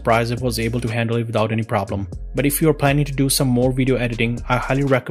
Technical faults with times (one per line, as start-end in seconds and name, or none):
1.54 DAB burbling
3.95-4.00 DAB burbling